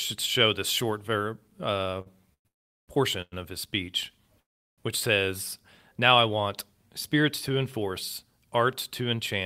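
At 2.01 to 2.08 s there's a short stall from a late packet: a sound gets held about 43 ms too long while the jitter buffer sits empty, then the speech picks up right where it left off with nothing lost.

Then come four call audio freezes, likely from packets held up in transit. The last sound trails off into silence and the speech resumes without loss. The first two run back to back, 2.34 to 2.47 s and 2.47 to 2.90 s, for over half a second. Another hits 3.22 to 3.34 s just before "of his speech which". The last, 4.40 to 4.80 s, sits between "of his speech" and "which says", with nearly 0.4 s of silence.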